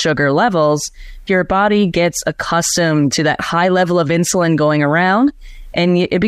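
Nothing goes wrong anywhere in this bit of speech, so there's no fault to point to.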